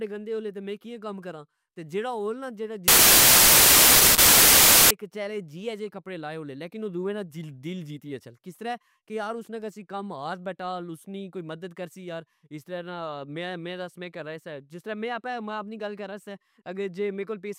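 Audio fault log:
2.88–4.91 s, samples built from the wrong bytes: right after "ہول نا" the speech gives way to loud, harsh broadband noise for about two seconds, and the speech returns at "کچیلے جیہ جے کپڑے". The reader assembled each sample from misaligned or swapped bytes, so the rapidly fluctuating low-order bits landed in the high-order positions and became the dominant part of every value.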